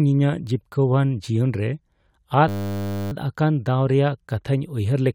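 From 2.48 to 3.12 s the speech gives way to a flat, steady buzz pitched at 100 Hz, with no movement in it for the full 0.64 s. This is a system hang loop: the computer or audio driver stalled while the sound hardware kept replaying its ring buffer, repeating one 10 ms slice of audio dozens of times in a row. A loop that short fuses into a tone rather than a stutter. When playback resumes, essentially no audio is missing.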